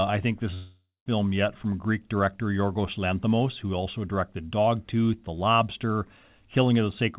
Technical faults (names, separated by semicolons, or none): long network dropout